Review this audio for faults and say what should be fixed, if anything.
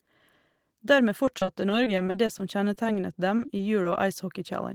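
Repeated packet loss (robotic sound), 1.25–2.97 s and again 3.37–3.96 s: the speech turns choppy as short holes, none longer than 40 ms, are patched by stretching the preceding sound, with about 15% and 12% of those spans concealed. A larger jitter buffer and a more stable network path would prevent it.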